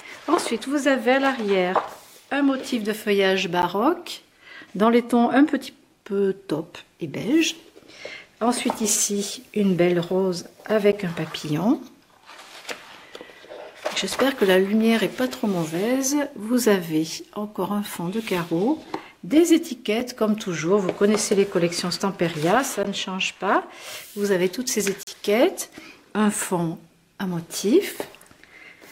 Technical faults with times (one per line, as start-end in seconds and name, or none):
3.62 block of digital silence
10.92 block of digital silence
20.00 block of digital silence
22.83 block of digital silence
25.03-25.07 block of digital silence